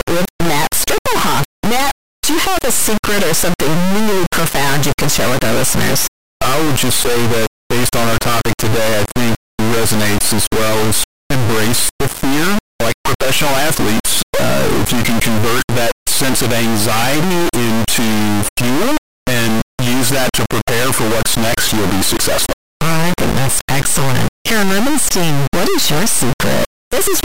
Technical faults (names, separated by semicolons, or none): integer read as float